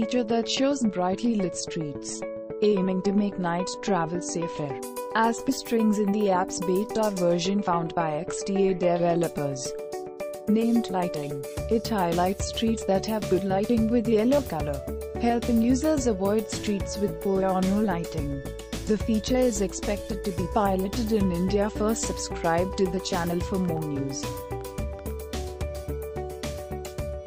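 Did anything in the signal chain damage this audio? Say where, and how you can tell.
Yes. A train of clicks runs from 23.19 to 25.12 s. About ten similar pulses arrive unevenly, near 4.7 per second, peaking at about the level of the sound itself. The likely cause is interference coupling into the analogue wiring, injecting short spikes.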